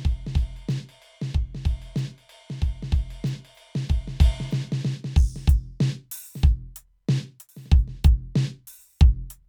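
No faults detected anywhere in the music clip.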